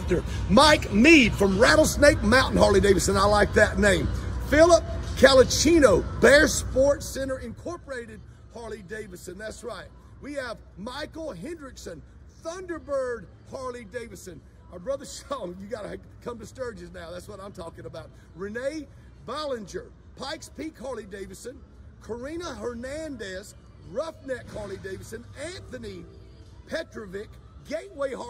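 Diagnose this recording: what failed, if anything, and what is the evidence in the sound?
Zipper noise appears in the gain stage, at the driver or buffer level. From 6.44 to 7.92 s the level falls by about 20 dB, and a fine ticking rides on the sound throughout the fall. The ticks come at roughly 50 per second. That points to a gain value updated once per buffer of about 20 ms, with no ramp between updates. Each jump in gain puts a small step into the waveform, and that step is heard as a click.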